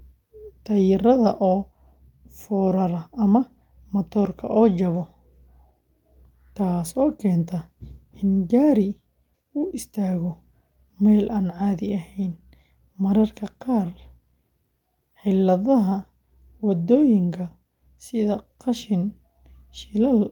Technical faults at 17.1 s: none

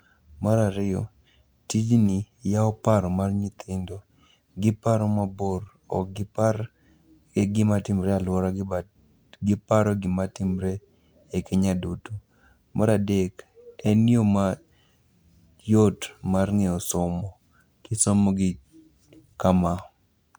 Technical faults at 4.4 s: none

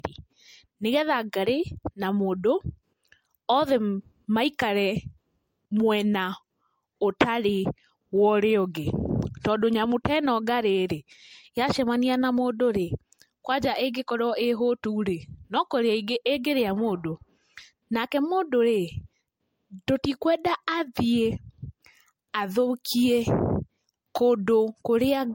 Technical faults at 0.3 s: generation loss

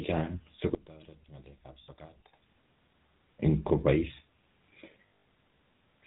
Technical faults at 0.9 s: GSM full-rate codec; one channel inverted

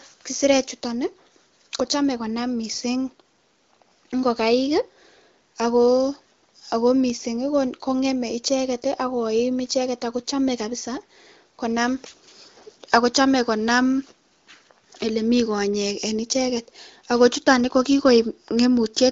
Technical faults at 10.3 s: none

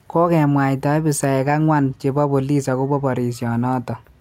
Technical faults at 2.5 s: none

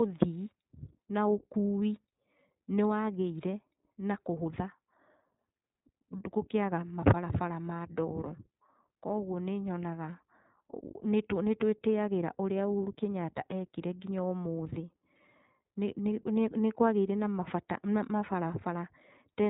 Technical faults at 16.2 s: iLBC codec

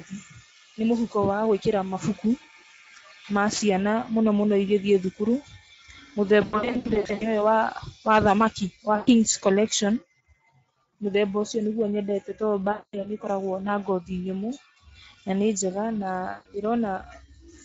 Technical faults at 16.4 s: Speex codec; VoIP packet loss concealed by the speech codec

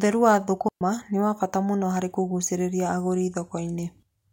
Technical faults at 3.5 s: none

